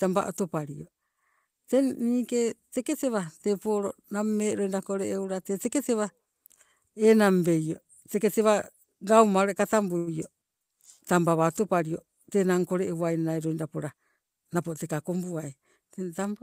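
At 9.97 to 10.09 s a packet arrived late and the jitter buffer ran dry, causing a short stall from a late packet. The receiver stretched the last sound for 94 ms until the data came, so nothing is lost, but that moment of speech hangs unnaturally long with a faint buzzy dip.

From 13.76 to 14.67 s a jitter buffer speed-up occurs. With more audio queued than its target, the receiver trimmed repeated pitch-period-length slices, dropping about a tenth of a second in total. Speech plays at 109% speed without a pitch change, sounding noticeably rushed.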